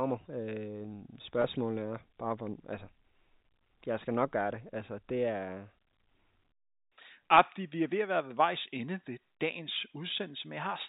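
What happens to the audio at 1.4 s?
At 1.42 to 1.44 s there is a brief packet loss with pitch repetition, just before "er bare". About 20 ms of audio went missing, which fits a single lost packet. The receiver filled the gap by repeating the last pitch period, so it sounds like a slightly held, buzzy note.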